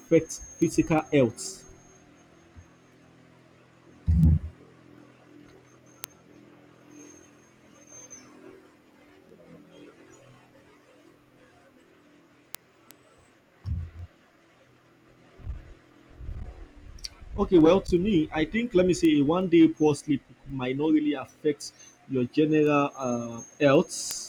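Word clock ticks run from 0.26 to 24.11 s of this speech clip, a sharp tick roughly every 0.4 s, as an unlocked receiver clock drifts and slips one sample.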